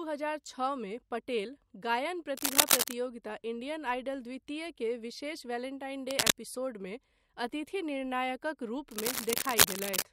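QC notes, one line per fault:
2.37–2.94 s, 6.08–6.32 s and 8.91–10.03 s, cable scratch noise: dense, uneven scratching and rustling lies over the speech. The first burst, about 10 dB above the speech, falls between "छओ मे पटेल गायन" and "इंडियन आइडल द्वितीय के". The second, about 5 dB above, follows "द्वितीय के विशेष वेलेंटाइन", and the last is also about 5 dB above. The likely cause is a worn cable or connector being moved, so its contact resistance jumped rapidly.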